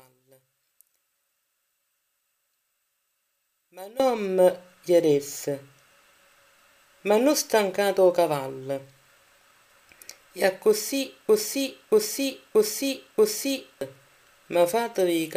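The audio has two separate faults. From the start to 4.0 s the level falls by about 23 dB and the sound empties out, leaving only a faint residue. That pattern points to one channel inverted, most likely a stereo channel with reversed polarity cancelling against the other when summed. A simple gain drop would keep the centre intact and only make it quieter. Here nearly all the material, background included, vanishes and only the faint mismatch between the channels is left. From 11.29 s to 13.81 s a piece 0.63 s long plays four times back to back with no variation. This is a broken-record loop, likely a player or stream that stalled and kept resending its last buffered fragment. Unlike an echo or a stutter, the repeats stay at full level with identical joins, and the audio that should have filled those 2.5 s is gone rather than delayed.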